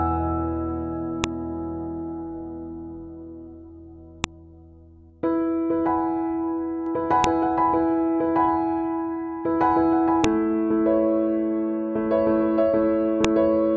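File header played as audio at 1.24, 4.24, 7.24, 10.24 and 13.25 s: each 3-second piece keeps its WAV header, which plays as a sharp, loud click.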